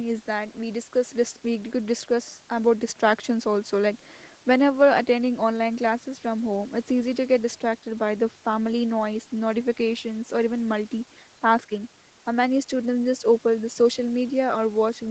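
No technical faults can be heard in this speech: nothing reaches above 8 kHz, which fits normal wideband call processing and an Opus call path at around 24 kbps, and the sound carries that path's usual coding texture.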